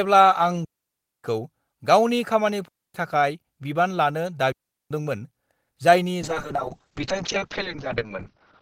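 At 0.65–1.24 s, 2.68–2.94 s and 4.52–4.91 s the speech falls into clean holes of near silence, about 0.59 s, 0.26 s and 0.39 s long. These are digital wireless dropouts: the radio link lost too much data, so the receiver muted with a very short fade. No burst of noise comes before or after. On a waveform each one is a flat gap with steep edges, and on a spectrogram each is a blank vertical band across all frequencies.

From 6.22 s to the end of the clip, the speech turns rough, watery and muffled. This is a call bitrate drop. The call's bandwidth estimate fell, and the encoder coded much more coarsely, at a rate that fits roughly 7 kbps. The audio bandwidth also narrowed from 20 kHz to 6 kHz. On a spectrogram everything above 6 kHz disappears abruptly, and the remaining energy looks smeared and blocky.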